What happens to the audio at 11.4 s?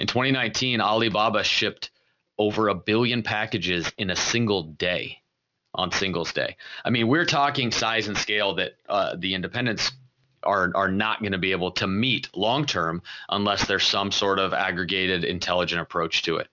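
At 11.4 s you're hearing aliasing, and it runs through the whole clip. Everything above 6 kHz folds back down as unrelated tones instead of being filtered off, which fits a drop to a 12 kHz rate. Sibilants come out gritty and metallic, with the folded junk sitting only somewhere around 15 dB under the speech.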